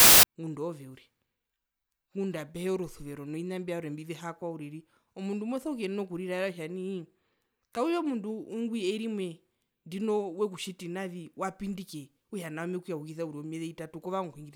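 File tags played as audio, from 0.00 to 0.23 s: an embedded cover picture, stored as compressed data, is read out as if it were samples. The result is a burst of very loud white noise with abrupt edges before the speech begins.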